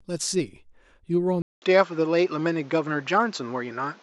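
At 1.42 s the speech drops out for about 200 ms, then comes back sounding duller, with nothing above 7.6 kHz, a level shift of around 5 dB, and a new noise floor sitting roughly 30 dB under the speech. That holds right to the end. It's most likely the input switched to a poorer device partway through, with the system jumping to a narrower-band microphone that brings its own tone, gain and hiss.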